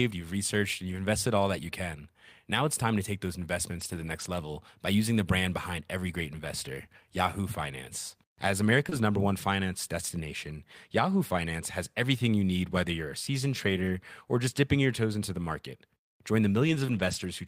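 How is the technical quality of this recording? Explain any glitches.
The recording has audible network glitches in five places, of two kinds.

Lost packets rebuilt from error correction occur at 3.71 to 4.25 s, 8.91 s, 13.65 to 13.95 s (between "whether you're a seasoned" and "or just dipping your"), 15.39 s (after "your toes into the") and 16.67 to 17.25 s. Each later packet carried a low-bitrate backup copy. The decoder played it, so nothing drops out. Those stretches sound rougher and noisier.

A short concealed packet loss occurs at 8.89 to 8.93 s, just before "number one finance destination." About 20 ms arrived too late. The receiver extended the preceding sound to fill the hole, then blended back. It is heard as a brief smear or wobble.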